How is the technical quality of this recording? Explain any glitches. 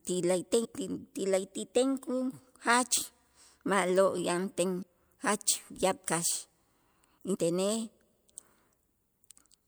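The recording has four dropouts where compressed frames are skipped, at 0.64, 4.81, 6.06 and 7.33 s. At each one, whole frames of the encoded speech never reach playback, so the audio jumps forward by roughly 70, 150, 100 and 100 ms, which fits a 24 ms frame length. At each join the speech jumps ahead by the missing stretch.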